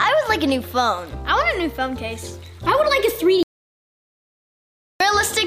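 The input was likely lost, leaving an audio dropout to silence from 3.43 to 5.00 s: about 1.57 s of silence, with no room tone, before sound resumes abruptly.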